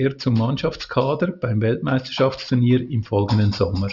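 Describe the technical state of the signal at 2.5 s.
At 2.5 s you're hearing aliasing, present across the whole clip. It sounds like a drop to 12 kHz without an anti-alias filter, so energy above 6 kHz folds back down at roughly 25 dB under the speech, giving sibilants a gritty, metallic edge.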